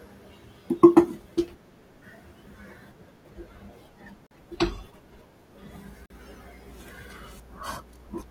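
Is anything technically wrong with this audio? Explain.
Yes. The speech drops out twice, at 4.27 to 4.31 s and again at 6.06 to 6.10 s, each time as a block of digital silence lasting about 43 ms. The signal switches to silence and back with no fade, leaving a short hole. Identical lengths point to an output buffer not refilled in time, which fits a 2048-sample buffer.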